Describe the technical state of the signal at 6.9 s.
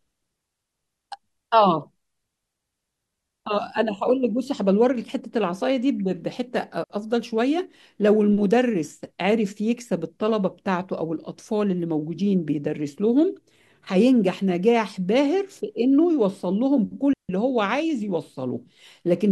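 At 6.84 to 6.90 s there is a digital wireless dropout. The receiver lost too much data and muted for 60 ms, with a very quick fade. The speech drops into a clean hole of near silence. No noise burst comes before or after it.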